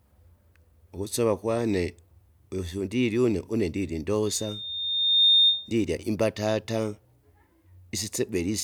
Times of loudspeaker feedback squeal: 4.26-5.72

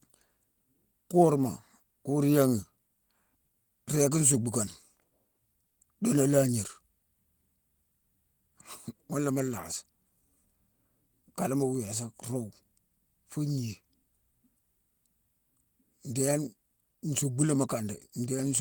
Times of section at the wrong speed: none

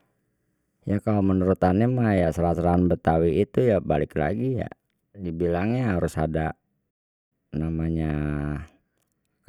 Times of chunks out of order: none

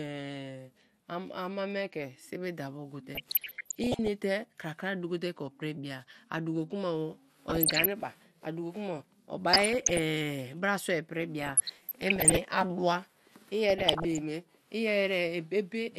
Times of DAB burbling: 3.15-4.08, 7.49-7.93, 9.53-9.99, 11.42-12.41, 13.70-14.19

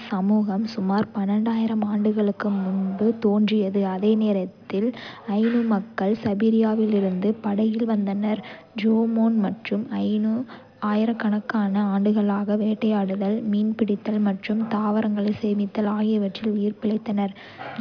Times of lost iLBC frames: none

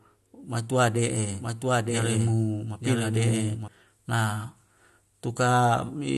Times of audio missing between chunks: none

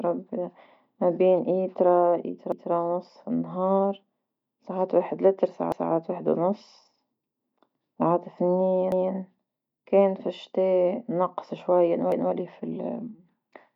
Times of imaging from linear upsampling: none

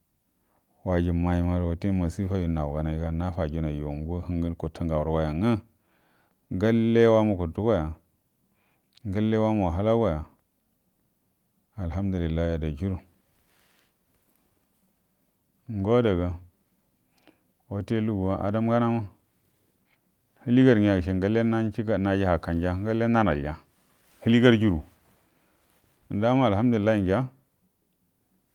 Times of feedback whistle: none

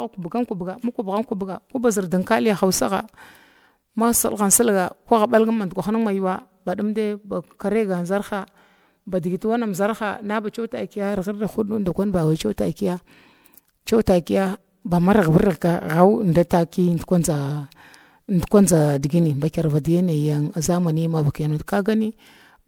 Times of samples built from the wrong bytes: none

